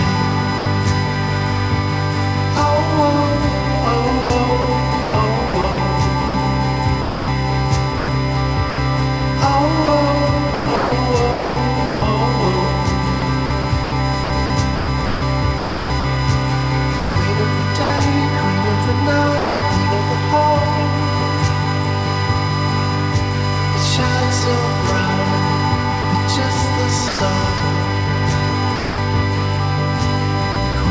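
A steady whine at 1 kHz runs through the whole clip, loud, only about 10 dB under the sound. This is USB whine: bus frame current leaking through power or ground.

From 0.58 to 0.66 s, 80 ms of sound vanishes into steady noise. This is sound dropped by the voice detector, likely a sender's detector mistaking it for background.

From 4.22 to 18.00 s, the sound turns choppy, with about 2.7 s replaced by synthetic noise in scattered pieces. This is sound chopped by the voice detector, likely switching on and off repeatedly.

From 19.38 to 19.62 s, another 240 ms drops out to comfort noise, likely the same dropout again.

From 26.02 to 28.98 s, likely chopping returns, with about 380 ms swapped for fill. From 30.52 to 30.74 s, 60 ms more is chopped.

The call path itself, which fits G.722, leaves nothing above 8 kHz.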